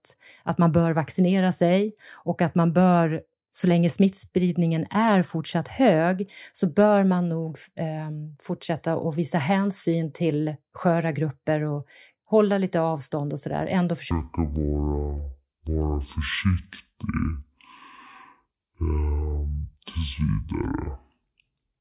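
Up to 14.11 s the speech runs at its natural speed and pitch, then from there to the end it's a wrong sample rate problem. The samples are being played out at half the rate they were captured at, with no conversion, which fits 16 kHz audio clocked out as if it were 8 kHz. So everything drops to half speed and a full octave, 12 semitones, lower. Voices come out slow and deep.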